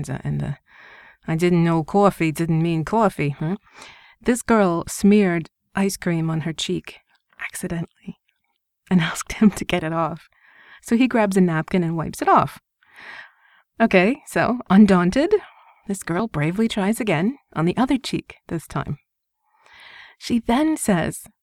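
Speech, with three brief skips at 4.21, 10.20 and 16.19 s, six seconds apart. Each drops only a few milliseconds and splices the two sides together without silence. The regular spacing points to audio missing between chunks, likely from a recorder handling 6-second blocks.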